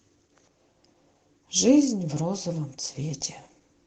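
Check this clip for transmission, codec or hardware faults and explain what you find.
No transmission, codec or hardware faults can be heard.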